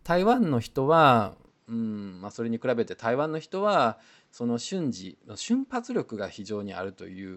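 At 1.47 s the speech abruptly turns duller and slightly quieter, dropping by roughly 5 dB, and stays that way to the end, with no gap at the change. From that point nothing reaches above 7.8 kHz, and a faint new background noise, about 45 dB under the speech, sits beneath it. This is likely an input switched to a poorer device partway through recording: the replacement microphone path has a narrower band, a different level and its own noise floor.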